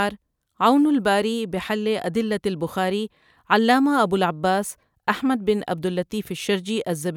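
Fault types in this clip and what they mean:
There are no fault types in this speech clip, so there is nothing to explain.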